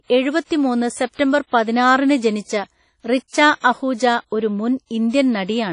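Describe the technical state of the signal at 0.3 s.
At 0.3 s the speech carries WMA compression throughout: ringing, washy smearing and breathing hiss with nothing above 10.1 kHz, likely a WMA encode around 32 kbps.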